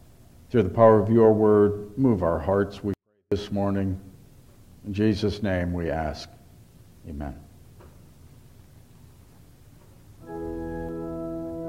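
A 24-bit alignment error drops the audio almost to silence from 2.94 to 3.32 s, then it returns at full level. The sound stays clean through the dip but sits about 48 dB lower. The samples were written as 24-bit integers in the low bytes of a 32-bit word and read back as full 32-bit integers, so every value lands eight bits too far down in the word, a fixed loss of about 48 dB.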